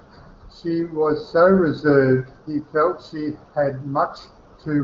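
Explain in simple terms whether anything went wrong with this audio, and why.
Nothing went wrong here.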